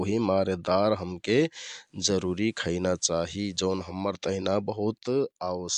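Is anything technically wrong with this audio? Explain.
Yes, there's a digital radio blend to analogue from about 1.80 s to 3.98 s. The receiver lost the digital stream and cross-faded over roughly 0.26 s to the station's FM broadcast, then faded back at the end. While it's on FM, a layer of hiss comes up, sitting around 40 dB under the speech, and the level shifts by about 1 dB, so you hear the background change and a slight step at each transition.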